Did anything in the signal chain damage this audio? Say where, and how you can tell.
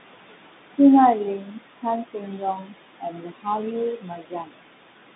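Yes. Noise suppressor artifacts run through the whole clip, a call-processing stage. The room noise, which sits about 9 dB under the speech, is pulled down by about 20 dB between phrases and swells back under them as the gain changes frame by frame.

The Bluetooth CVSD headset codec is audible throughout. Nothing reaches above 3.8 kHz, and the line band runs about 150 Hz to 3.7 kHz. There is plainly audible granular hiss and scratchy sibilance where the one-bit delta step cannot track loud high content, which fits a 64 kbps CVSD link.

Speech is cut by the noise suppressor at 1.37 to 1.86 s, 2.04 to 2.75 s, 2.98 to 3.47 s and 3.96 to 4.65 s. Level drops by as much as about 22, 17, 21 and 22 dB. The suppressor mistook parts of the speech for noise, so they sound swallowed.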